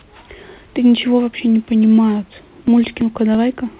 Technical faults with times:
2.17-3.51 CD scratch ticks

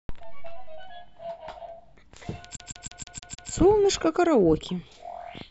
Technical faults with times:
2.55-3.49 repeated frames

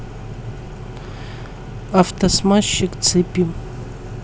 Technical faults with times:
2.16-2.20 chunks out of order

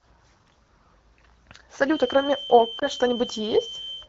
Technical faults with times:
2.79-2.84 lost AMR speech frames

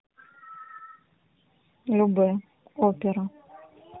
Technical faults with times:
0.00-4.00 tandem speech coding

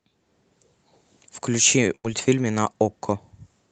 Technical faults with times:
1.95-2.06 burst of packet loss

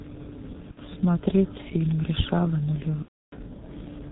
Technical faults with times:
0.00-4.12 G.723.1 codec
0.71-0.80 VoIP packet loss concealed by the speech codec
3.02-3.37 VoIP packet loss concealed by the speech codec

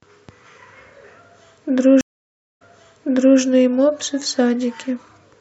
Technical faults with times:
2.01-3.40 stream reconnect

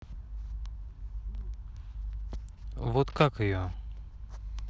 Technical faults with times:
3.10-3.27 cable scratch noise

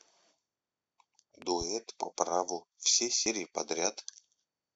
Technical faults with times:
1.42-1.64 loud pop
3.26 audio missing between chunks

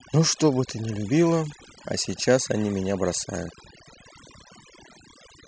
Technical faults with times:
0.00-5.47 overdone noise removal

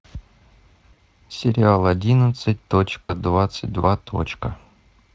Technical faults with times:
0.93-0.99 VoIP packet loss concealed by the speech codec
3.05-3.14 VoIP packet loss concealed by the speech codec

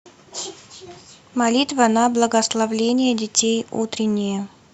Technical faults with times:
1.75-2.81 Bluetooth SBC bit pool drop
4.19 dropped samples

